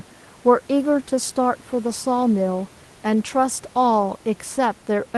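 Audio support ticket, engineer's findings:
No faults found in the speech on this call path. The codec's top end stops near 12 kHz with its usual coding noise, consistent with a low-bitrate Opus call, and room noise sits about 30 dB below the speech.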